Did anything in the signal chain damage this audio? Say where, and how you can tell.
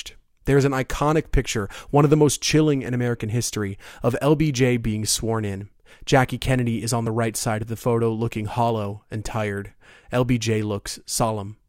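Yes. Overlap between stream segments at 7.07 s and 11.06 s, damaged at the streaming or playback stage where segments are joined. Each event is a brief click or tiny skip in the speech, and the two are exactly 4 s apart, matching 4.0 s segments. The time stamps of adjacent segments overlapped, so the player discarded the overlap even though that sound had never actually been duplicated. Around 10 ms of real audio vanished each time, and the waveform jumps across the gap.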